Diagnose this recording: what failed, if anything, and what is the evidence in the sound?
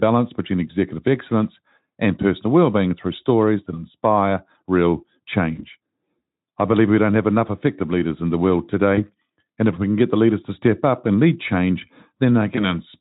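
Network stage: VoIP packet loss concealed by the speech codec at 0.67–0.74 s (before "excellence and personal"), 5.55–5.65 s (after "stories that inspire real"), 8.96–9.01 s (before "and if we can") and 12.55–12.68 s. Each event is one lost 20 ms frame. The Speex decoder extrapolated its last pitch and filter at falling gain, producing a brief buzzy or noise-like fill that lingers past the gap.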